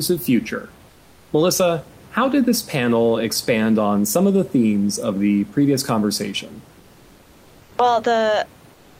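From 0.89 to 1.29 s, 6.79 to 7.71 s (after "of the previous conversation") and 8.73 s to the end, the room noise turns flat and featureless, about 5, 3 and 3 dB quieter: comfort noise in place of the background, likely from discontinuous transmission such as Opus DTX.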